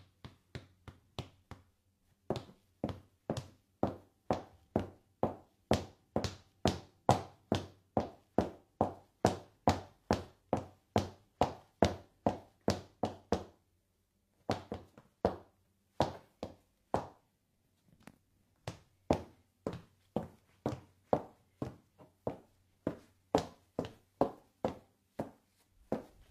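At 10.25 to 10.31 s, the sound briefly turns smeared and grainy, as if a short slice had been smudged over, then snaps back to normal. This is AAC frame loss with concealment. The gap is about 43 ms, which points to a single missing frame. The decoder had nothing to play for it, so it filled the hole from the last good frame's spectrum with scrambled signs or interpolated energy. That reused, blurred content is what replaces the real detail there.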